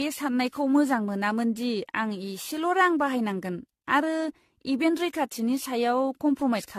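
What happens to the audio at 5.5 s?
At 5.5 s you're hearing generation loss, which runs through the whole clip. The speech sounds swirly, hollow and smeared, with softened attacks and nothing above 14 kHz. That likely comes from around ten passes through an AAC-style codec near 64 kbit/s, each adding its own quantisation damage.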